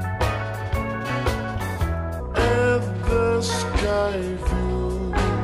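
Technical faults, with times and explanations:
2.20–5.43 s, section at the wrong speed: the sound abruptly drops about five semitones and drags, playing at 0.745 times normal speed, likely from a wrong playback or editing clock.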